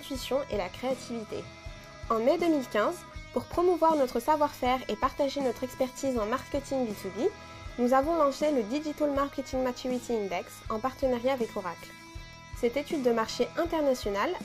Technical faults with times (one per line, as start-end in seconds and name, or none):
none